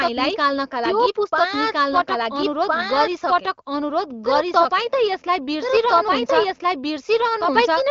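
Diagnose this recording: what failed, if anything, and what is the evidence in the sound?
The speech is carrying a doubled audio track, most likely from the same signal being captured a second time through a slower path, or an edit that left two copies out of step. Throughout the clip a second, full-band copy runs about a second and a half behind the first at roughly equal loudness, with no decay or room colour. Each phrase comes back clean and dry over the following one, so the two streams overlap as competing speech, above the band-limited HD Voice codec sound topping out near 7.3 kHz.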